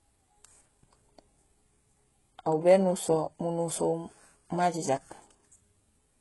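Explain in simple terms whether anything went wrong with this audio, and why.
Something did go wrong: the speech was most likely squeezed through HE-AAC compression, heavily, for the whole clip. To save data, the encoder kept only the lower part of the sound properly and faked the upper part by copying lower sounds upward, with nothing at all above 11.5 kHz. From start to finish, the treble is not genuine, so s sounds come out gritty, metallic or lispy.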